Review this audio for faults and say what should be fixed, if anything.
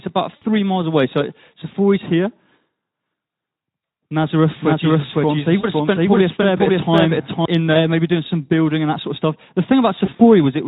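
Packet loss concealed by the speech codec happens four times: 0.35 to 0.43 s just before "miles away", 5.59 to 5.65 s, 7.73 to 7.76 s before "maybe doing some building", and 9.95 to 10.24 s. In each gap the Speex decoder extrapolates from its last pitch and filter with falling gain, so the sound fades. Dropouts run 20 to 60 ms, and the last is 100 ms scattered over 240 ms. To prevent it, use a bigger jitter buffer or add FEC on the network path.

There's a doubled audio track from 4.61 to 7.45 s, with a full-band copy about as loud as the original and roughly half a second behind, starting and stopping abruptly. The likely cause is a second, slower capture path. To prevent it, make sure only one route feeds that source into the mix.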